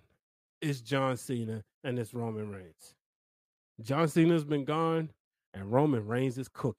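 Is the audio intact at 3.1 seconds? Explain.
Yes, at 3.1 seconds the speech is intact, with no dropout, click, distortion or other fault in the signal at that point.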